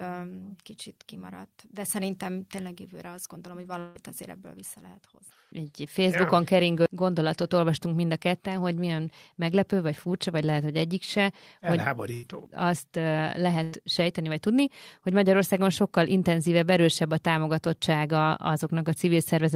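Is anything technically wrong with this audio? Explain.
Yes, the speech has three kinds of transmission fault.

From 3.79 to 3.98 s there is a long network dropout. The last sound is stretched into a held, decaying buzz or hiss for about 157 ms, and the speech then resumes with roughly 120 ms of material gone. The gap never reaches true silence. The likely cause is a stretch of packets that never arrived, with the receiver synthesising audio to cover it. Playback timing shifts by about 40 ms across the event.

Two bursts of packet loss occur, at 12.14 to 12.26 s and at 13.63 to 13.75 s. In each, the receiver repeats the preceding sound and attenuates it as the gap continues, giving a short fading buzz or hiss lasting 92 ms and 86 ms respectively. Each time, about 60 ms of speech is skipped when audio resumes. The playout delay shifts by 32 ms and 26 ms.

From 12.48 to 12.88 s, a jitter buffer speed-up follows the first burst. 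The buffer had accumulated excess audio, so the receiver trimmed short pitch-period segments repeatedly, removing about 40 ms in total. The speech runs at 107% speed at unchanged pitch, which sounds rushed over that stretch.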